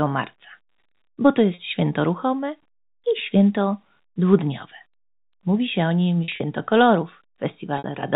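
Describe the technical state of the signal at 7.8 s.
A brief held, buzzy repeat from 7.78 to 7.84 s: packet loss with pitch repetition, the last pitch period looped to bridge a 60 ms gap.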